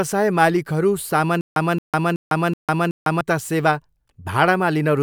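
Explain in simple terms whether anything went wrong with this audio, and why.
From 1.41 to 3.21 s there is stutter with silent gaps. A 0.22 s snippet repeats five times with 0.15 s of silence between. The playback likely stalled and lost speech.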